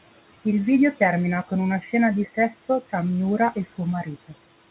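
Throughout this speech recording, the background noise drops away in the gaps and swells back up under the talking. These are noise suppressor artifacts: the suppressor pulls down each frequency band it judges to be steady noise, frame by frame, here by about 18 dB, so the residue pumps with the speech. The room noise, sitting about 18 dB under the speech, is what the suppressor is working on. Between 1.81 and 1.91 s the speech briefly goes faint and sounds swallowed, dipping by up to about 8 dB for roughly a tenth of a second. This is speech cut by the noise suppressor, which mistook that soft stretch for background and turned it down along with the noise. The narrow, telephone-like band with nothing above 4 kHz fits a G.711 A-law call path at 64 kbps.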